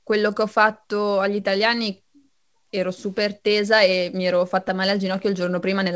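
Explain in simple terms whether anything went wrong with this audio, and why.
From about 0.02 s to 5.85 s, the speech has a faintly unsteady pace, with small hiccups where tiny slices of sound seem to stutter or stretch. The pace runs at roughly 97 percent of normal, and the whole stretch ends up about a seventh of a second longer. These are repeated timing corrections: the receiving end keeps repeating short bits of audio so it doesn't run out while waiting for more, and the repeats land at uneven spacing.

The reason for those repeats is clock drift between sender and receiver. The sending device's audio clock runs about 3 percent slow compared with the listener's, so sound arrives slightly slower than it is played out. The buffer holding incoming audio keeps draining, and the receiver has to pad it by reusing small pieces again and again across the whole clip. The call itself came through a standard call codec, which leaves no sound above 8 kHz, so the very top sparkle is missing.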